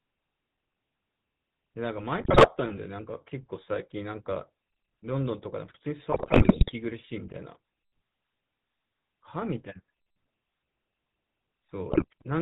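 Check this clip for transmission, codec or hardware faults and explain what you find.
Two faults are present: the speech has passed through a GSM full-rate codec for its whole length, and three short bursts of GSM bit errors corrupt it further.

GSM full-rate codec, throughout: the coder models the vocal tract and drives it with a sparse, regularly spaced pulse excitation, which fits the 13 kbit/s full-rate scheme. Everything above 4 kHz is gone, and the voice carries a plainly audible buzzy, gravelly roughness.

GSM bit errors, at 2.2 to 2.48 s, 6.12 to 6.72 s and 11.90 to 12.05 s: corrupted bits reached the decoder, which points to a bad radio link, with the middle burst the longest. Damaged filter, pitch and gain values distort the spectrum and level frame by frame, so the voice breaks into squawks, pops and gargling.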